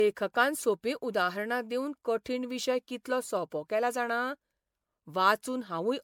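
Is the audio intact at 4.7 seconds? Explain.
No. At 4.7 seconds, as throughout, the speech sounds swirly, hollow and smeared, with blurred attacks and nothing above about 19.9 kHz. This is generation loss, likely from roughly ten MP3 passes near 128 kbit/s, each re-quantising on a shifted frame grid so noise and spectral holes accumulate.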